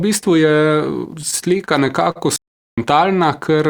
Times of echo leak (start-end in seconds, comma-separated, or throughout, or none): none